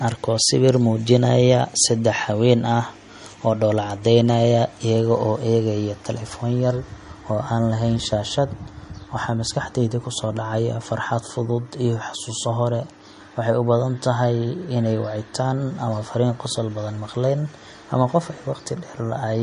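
Speech throughout carries MP3 compression artefacts: nothing above 10.6 kHz, watery swirling on sibilants and smeared attacks, likely from an encoder starved of bits, consistent with about 40 kbps.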